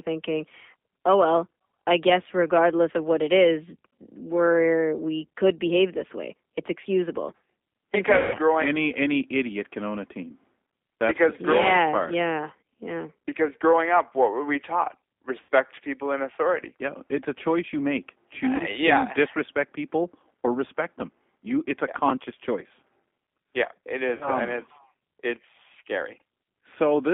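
Throughout the recording the speech carries the plainly audible rough, slightly synthetic texture of the G.729 codec. The sound fits the 8 kbit/s G.729A variant, which rebuilds each 10 ms frame from a vocal-tract filter, a pitch predictor and a few pulses. The line band runs from about 250 Hz to 3.6 kHz, so the low end is thin and nothing above that upper edge survives.

VoIP packet loss concealed by the speech codec occurs four times. The longest is at 8.17–8.38 s, between "way it's excusable because" and "growing any any idiot", where about 160 ms of audio is missing. The others are at 15.43–15.48 s (after "what were we taught", before "people in authority"), at 18.56–18.62 s, and at 24.15–24.30 s (between "it is" and "and it's"). In each gap the decoder extends its last pitch and filter state at falling gain. The speech smears into a fading buzzy tone or coloured noise and stays weak while the decoder recovers.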